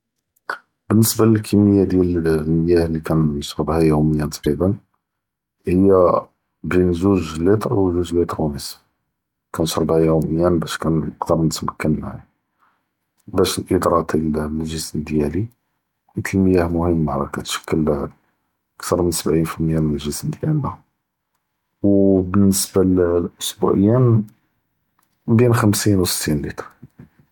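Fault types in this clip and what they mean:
Damaged data in a compressed stream: a brief blip from 4.43 to 4.47 s, where corrupted bytes made the decoder misread frames and lose sync.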